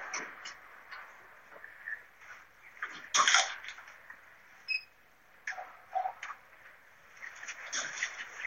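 At 6.59 s, compressed frames are skipped: the audio jumps ahead by roughly 50 ms, which points to about two missing or rejected frames. The join shows as a short discontinuity in the waveform and a seam on the spectrogram.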